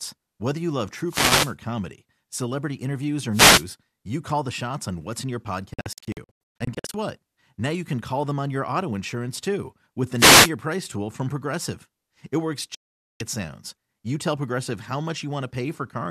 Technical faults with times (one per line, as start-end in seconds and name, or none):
1.07-1.55 wireless microphone noise hit
3.31-3.66 wireless microphone noise hit
5.74-6.94 digital broadcast dropout
10.17-10.51 wireless microphone noise hit
12.75-13.21 digital broadcast dropout